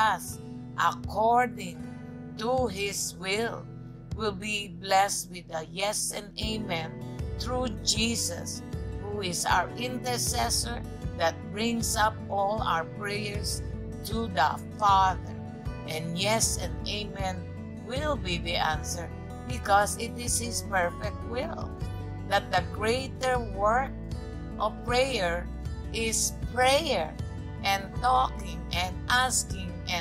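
No dropouts, clicks, distortion or timing errors turn up anywhere in the clip.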